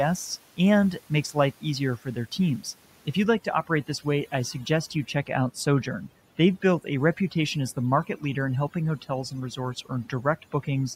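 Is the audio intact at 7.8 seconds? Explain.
No, from 3.24 s to the end there's overdone noise removal: it clamps bands near the noise floor, leaving a broken-up background of twinkling specks.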